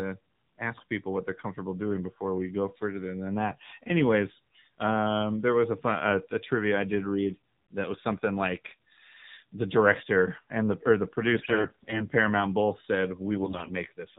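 AMR narrowband mobile codec damage runs through the whole speech clip: nothing above 4 kHz survives, and the voice is plainly buzzy and synthetic, which fits AMR-NB at around 7.4 kbps. AMR bit errors hit from 11.35 to 12.06 s and from 13.32 to 13.72 s. Flipped, weakly protected frame bits, roughly 10% and 7% respectively, misplace the excitation pulses, so pitch and level hold while the voice turns hoarse, scratchy and gargly.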